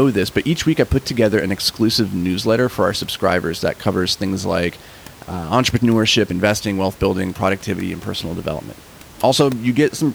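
Nothing goes wrong in the speech here, and the only other thing you'll notice is a bit of room noise sitting about 24 dB below the talking, which is just part of the space the microphone was in.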